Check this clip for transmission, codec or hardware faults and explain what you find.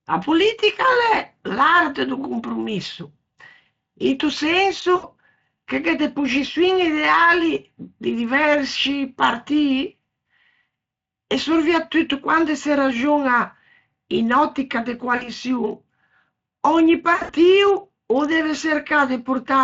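Three brief dropouts come from VoIP packet loss concealed by the speech codec, at 4.95 s (about 80 ms lost), 15.15 s just after "in òttica de" (60 ms), and 17.13 to 17.33 s (140 ms scattered over 160 ms, longest run 80 ms). The decoder repeats its last pitch and filter with falling gain, so speech smears into a fading buzz or coloured noise. A spectrogram shows frozen, repeated harmonics decaying, and the waveform shows a shrinking periodic tail. The Speex coding underneath sounds only lightly coloured, consistent with a fairly high quality setting.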